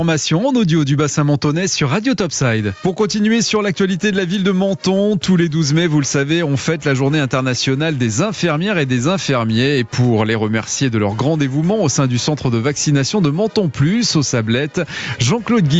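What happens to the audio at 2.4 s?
At 2.4 s the audio is caught in gain pumping, which runs through the whole clip. The gain swings by around 10 dB with each loud sound, likely because the input gain sits far too high and a fast limiter keeps clamping it. On a waveform the envelope looks flattened, with peaks squashed together. A spectrogram shows everything within the call's 8 kHz band.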